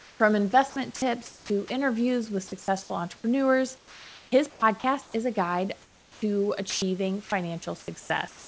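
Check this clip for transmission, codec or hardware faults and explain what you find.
Yes, there are faults. The speech comes through with the voice detector repeatedly cutting in and out, and the background is replaced by synthetic fill at several points. The call path itself sounds like a wideband codec with nothing above 8 kHz, which fits G.722 at 64 kbps. Steady room noise sits about 29 dB below the speech.

Comfort noise in place of the background occurs at 0.0–0.2 s, 5.82–6.22 s (right after "is a guide") and 8.0–8.48 s. The likely cause is discontinuous transmission: the sender stops sending in pauses and the receiver generates a smooth, detail-free noise instead. At the start it is about 2 dB quieter than the real background. At 5.82 s it drops about 14 dB, a clear hush. No speech is lost, which separates it from a drop.

Sound chopped by the voice detector appears at 0.70–1.70 s, where about 380 ms is replaced, and at 3.78–5.14 s, ending just before "is a guide", where about 820 ms is replaced. 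The detector likely toggled between sending and muting several times within each stretch. Quiet syllables and word edges flicker out into synthetic noise and back. It is the repeated switching within one stretch that marks this as chopping rather than a single drop.

Sound dropped by the voice detector happens at 2.62–2.68 s, just after "interviews with", and at 6.70–6.82 s. The detector likely judged low-level speech to be background and stopped sending. About 30 ms of sound vanishes in the first case and 120 ms in the second, with steady noise playing until sending resumes. Each is a single gap, and unlike comfort noise alone, actual speech goes missing.

The onset is clipped by the voice detector at 6.13–6.22 s. The detector was likely slow to notice speech returning after the quiet fill, so the first 90 ms was never sent. The sound begins abruptly, missing its soft start. Only the beginning is affected, and speech continues normally once sending resumes. 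That distinguishes it from a drop in the middle of a sound.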